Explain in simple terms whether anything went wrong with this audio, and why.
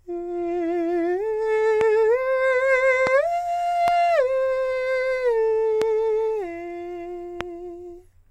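Something in the playback or recording chain likely let sudden jolts of electricity into the signal, the kind a loose plug, a flicked switch, static or a glitching driver can cause. Each jolt lands on top of the music as a loud pop, a single sharp snap much louder than the music, which keeps playing underneath. This loud pop happens five times, at 1.81, 3.07, 3.88, 5.82 and 7.41 seconds, each lasting only a split second.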